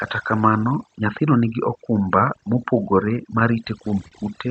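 Speech with overdone noise removal throughout: the suppressor pulls bands near its noise estimate far down, leaving a lowered background with twinkling specks. From 3.39 to 4.14 s there are repeated stalls (stutter), four short holds totalling about 62 ms, the longest 37 ms. Late packets emptied the jitter buffer, and the last sound was extended each time, so nothing is lost but the audio drags. The top end stops at 8 kHz, consistent with an Opus call path.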